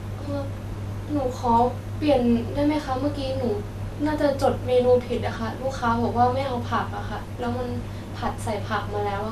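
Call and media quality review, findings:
Dull, gurgling, granular speech throughout, nothing above 14.2 kHz; likely MP2 compression, upper sub-bands switched off and coarse quantisation, consistent with a low bitrate near 80 kbps.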